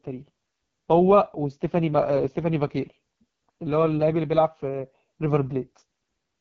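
From start to finish the speech passes through the AMR wideband (HD Voice) codec, heavily damaged. Voices sound rough and raspy, which fits its lowest 6.6 kbit/s mode, where the pulse-driven vocal model runs short of bits. Nothing is present above 7.3 kHz.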